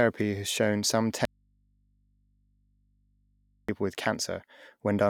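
After "has shown some", the speech cuts abruptly to faint hum from 1.25 to 3.69 s. This audio dropout to a faint residue likely left the input live.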